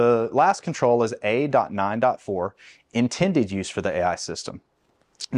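No technical faults are audible anywhere in the clip.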